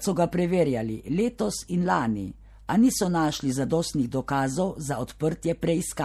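Throughout the speech, plainly audible swirly, watery artefacts point to likely MP3 compression at a low bitrate, fitting roughly 64 kbps. A spectrogram shows content stopping at 20.4 kHz, with weak high bands flickering on and off between frames in patchy holes.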